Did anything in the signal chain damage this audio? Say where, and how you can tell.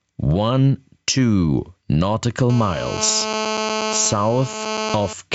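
Yes, at two stages. Gain pumping runs through the whole clip, with a gain swing of roughly 15 dB. This points to the analogue input stage. The microphone gain is likely set far too high, so a fast limiter or compressor keeps clamping down on loud peaks and releasing in the pauses. Loud and quiet passages are pushed together, leaving the sound squashed.

A GSM phone buzz enters the analogue wiring from 2.50 s to 5.13 s. It is a hard, raspy tone at 217 Hz, rich in harmonics, at about 15 dB below the signal, and it has nothing to do with the program material. It is nearly steady, which fits a handset in an active call. A nearby 2G phone transmits in 217 Hz bursts, and the audio circuitry rectifies those radio pulses into the audible buzz.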